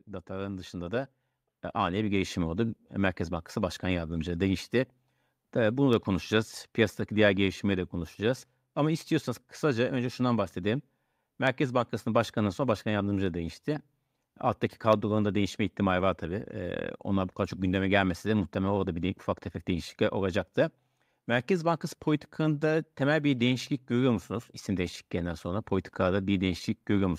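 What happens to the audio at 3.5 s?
At 3.5 s you're still inside an automatic gain rise running from 0.05 to 4.26 s: the AGC heard a quiet input and cranked gain up about 10 dB, so speech and background swell together.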